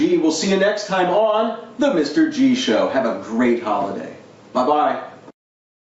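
Right from the start and all the way through, there's gain pumping: the level keeps lurching, with each loud moment pulled down and the gain creeping back up afterwards, a swing of something like 10 dB. Loud and soft stretches sit closer together than they should, so it all feels squashed. The likely cause is input gain set far too hot, with a fast limiter or compressor clamping each loud hit. The call path itself caps everything at 8 kHz, which fits Opus at around 64 kbps.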